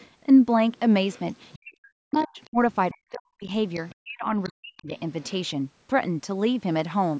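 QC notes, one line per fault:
0.0–0.07 s, 1.12–1.59 s, 2.12–2.75 s, 3.74–3.95 s, 4.78–5.31 s, other side's voice leaking through: a second, fainter talker sits under the speech, a brief scrap at the start and then longer stretches, roughly 25 to 35 dB below the main voice. This is likely loudspeaker playback of the far end reaching the microphone and not fully removed by the echo canceller, so residual echo passes into the send path.
1.55–2.58 s, 2.91–3.51 s, 4.04–4.92 s, speech suppressed in double talk: the main voice sinks sharply, by up to around 40 dB at its deepest, for roughly 0.7 s, 0.5 s and 0.7 s in total across these spans. The first and last overlap the leaked far-end passages. While both sides were talking, the echo canceller likely could not separate the near talker from the echo and attenuated everything, taking the wanted speech down with the echo.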